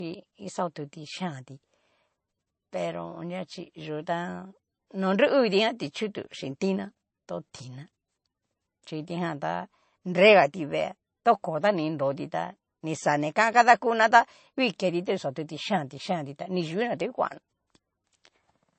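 Right through the speech, nothing sits above 8.3 kHz and the swirly, smeared detail stays put. It's likely low-bitrate audio saved at a high bitrate, a roughly 31 kbit/s MP3 re-encoded at 256.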